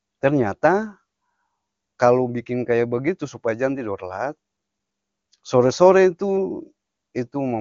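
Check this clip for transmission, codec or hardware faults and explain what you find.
No transmission, codec or hardware faults are audible.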